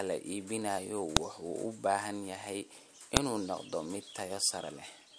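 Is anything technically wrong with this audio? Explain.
Yes, there's a file header played as audio. At 1.17 s and again at 3.17 s you get a sharp, loud snap. The pieces, spaced 2.0 s apart, were joined with their WAV headers still in place, so those few header bytes play back as samples.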